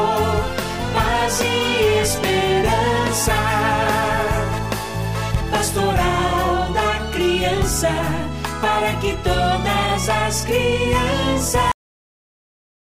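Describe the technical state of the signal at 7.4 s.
At 7.4 s the signal is intact, with no audible dropout, distortion or glitch at that point.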